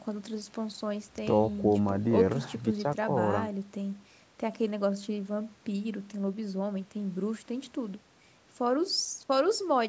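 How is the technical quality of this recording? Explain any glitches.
No glitches turn up anywhere in this speech recording; it has the typical sound of a call microphone, with the lowest bass trimmed away and nothing above 8 kHz, and that's just how this path normally behaves.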